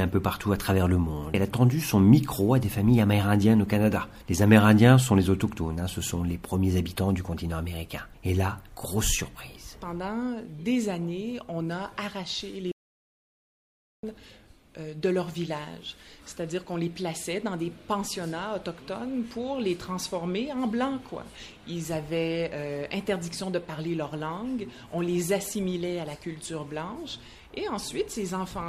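At 12.72 s the input feeding the recorder was likely interrupted, through a dropped connection or a mute switched in mid-take, while writing carried on with silence. The result is an audio dropout to silence lasting about 1.3 s, until 14.03 s. The sound cuts off abruptly and returns just as suddenly, and the gap between holds no room tone or noise floor at all. Whatever occurred in those 1.3 seconds is simply missing.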